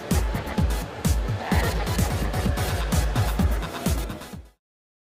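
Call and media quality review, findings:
Nothing to flag here, just an ordinary editor-style fade out that begins at around three and a half seconds and has finished by 4.61 s.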